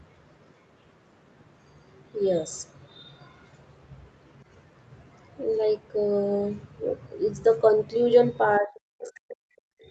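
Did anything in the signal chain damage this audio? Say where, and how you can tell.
Yes. The damage sits in the call processing stage, at the echo canceller. The first fault is the other side's voice leaking through. A second voice appears briefly at 1.94 to 2.04 s, far below the talker at about 35 dB down. It returns from 3.0 to 3.48 s at about 30 dB down. At 9.0 to 9.11 s it is much stronger, about 15 dB below the speech. The likely cause is loudspeaker echo the canceller failed to subtract from the microphone.

The second fault is speech suppressed in double talk. From 8.6 s to the end of the clip, the talker's level falls away. At its deepest the drop reaches about 40 dB. The leaked voice at 9.0 s sits inside this stretch, so both sides were active at once. The likely cause is the canceller failing to separate the near talker from the echo. It then turned the whole signal down rather than just the echo.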